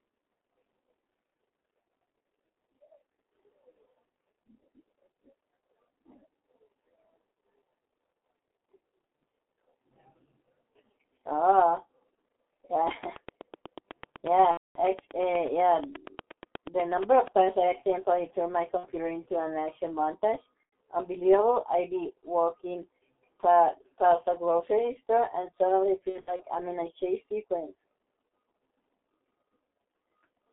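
Throughout, the speech passes through the G.723.1 codec at about 6.3 kbit/s, confined to roughly 250 Hz to 3.5 kHz, leaving it heavily muffled and hoarse with smeared consonants.

From 12.91 to 17.41 s a train of clicks, likely electrical interference or a faltering interface, adds about forty evenly spaced ticks at 8.25 per second, peaking around 10 dB above the speech.

VoIP packet loss concealed by the speech codec first strikes at 14.51 s. A 240 ms gap, which fits eight 30 ms frames, is bridged by extrapolation into a fading buzz. Shorter gaps follow at 18.77 s, between "turned my" and "into an action montage", and at 20.63 s, between "into an action montage" and "unbelievable i be walking". These are 60 and 90 ms long and come through as brief buzzy smears. From 26.10 to 26.43 s, between "grocery store and suddenly" and "I'm in a chase", losses totalling 150 ms scattered over 300 ms leave the speech weak.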